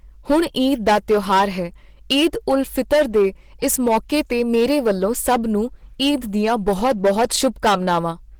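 From start to finish, a stage in the chain is driven about 11 dB past what it can pass, so the speech peaks are sliced flat. This hard clipping catches roughly one sample in twenty, adding high harmonics heard as a harsh, crackling fuzz on every louder syllable.

Also throughout, the speech sounds muffled, hoarse and grainy, with rough, noisy texture where clean tone should be, though content still reaches about 20.2 kHz. This is likely Opus compression running in its hybrid speech mode, which fits a low bitrate around 16 kbps.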